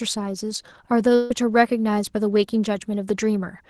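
At 1.15 s a burst of packet loss takes out about 150 ms of speech, up to 1.31 s. The receiver fills the gap by extending and fading the last sound, giving a brief held buzz or hiss. On a spectrogram, frozen, dimming bands precede an abrupt jump where speech resumes further on. The call path's codec limits the top end near 12 kHz, which fits Opus at a modest bitrate.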